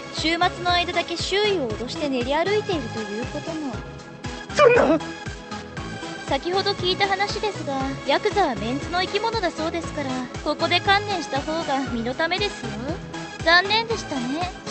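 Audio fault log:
No fault to log; the audio fault log for this clip is empty.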